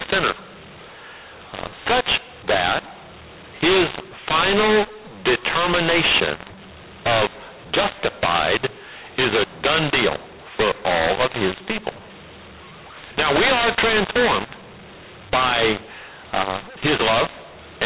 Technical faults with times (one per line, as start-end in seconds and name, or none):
0.00-17.86 mu-law and A-law mixed up